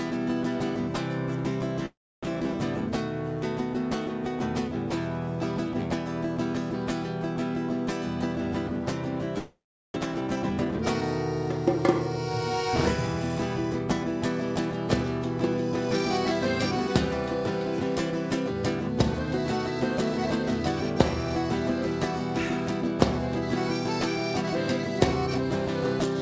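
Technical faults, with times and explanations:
1.86–2.25 s, long network dropout: the sound breaks off and the gap is bridged by a fading continuation of the last sound, leaving about 0.3 s of silence before audio resumes with roughly 0.4 s missing. This likely comes from packets failing to arrive.
2.29–2.54 s, jitter buffer slow-down: right after the gap, the receiver stretches the audio to rebuild its reserve, repeating pitch periods so playback runs at about 85% speed with unchanged pitch, adding 45 ms and drawing sounds out.
9.38–9.98 s, long network dropout: a second break, filled by a decaying buzz of the preceding sound that gives way to about 0.4 s of silence; roughly 0.4 s of audio never returns. This is likely a run of lost or stalled packets.
10.05–11.02 s, jitter buffer speed-up: the late audio arrives in a bunch, so the receiver trims short pitch-period pieces repeatedly, playing at about 116% speed at the same pitch and removing roughly 150 ms, which makes this stretch sound hurried.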